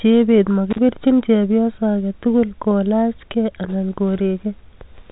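A loose cable or plug briefly lost contact between 0.70 and 0.78 s, an intermittent contact fault that opened the line for about 36 ms. The speech drops out abruptly, with a short crackle at each edge as the connection breaks and remakes, and faint hiss fills the gap before the audio resumes on "chepyoso age tugul". The band limit near 3.8 kHz from the telephone coding holds steady through the dropout.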